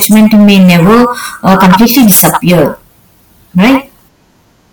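Hard clipping runs through the whole speech clip. It is overdriven by about 15 dB, so around 15 percent of samples are flattened. Loud syllables turn harshly fuzzy.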